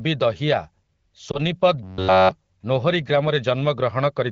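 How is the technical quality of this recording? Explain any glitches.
The recording has two audible glitches in this wideband phone-call speech: one brief dropout and one stretch of robotic buzzing.

Lost AMR speech frames, 1.31 to 1.39 s: a radio error corrupted the audio, consistent with a single 20 ms frame, and the decoder covered the gap by reusing the last good voice settings at falling gain. The result is a short dip and warble before the speech recovers.

Robotic sound from repeated short buffers, 1.83 to 2.31 s: the audio turns into a rigid, metallic buzz at about 94 Hz throughout this half-second. This is likely caused by audio arriving too seldom, with the software repeating a roughly 11 ms buffer in place of the real sound.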